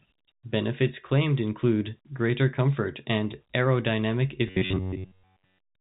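From start to finish the speech carries a gritty, grainy distortion that tracks its level, with quieter passages roughening and the error sitting about 45 dB below the signal. The likely cause is low bit depth without dither: samples rounded to roughly 10 bits, so the error follows the waveform. The telephone-band G.711 path stops short of 3.8 kHz.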